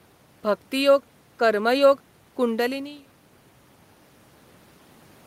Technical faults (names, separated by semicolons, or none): none